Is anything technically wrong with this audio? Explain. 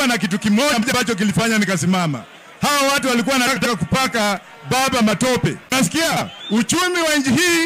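Yes. At 0.73–0.93 s, 3.47–3.67 s and 6.11–6.22 s the sound briefly turns into a garbled flutter. These are frames out of order: two adjacent blocks of coded audio were decoded in swapped sequence, so each stretch plays its second half first. The blocks are about 93 ms each in the first two events and about 46 ms in the third, which fits runs of four and two frames. No time is lost.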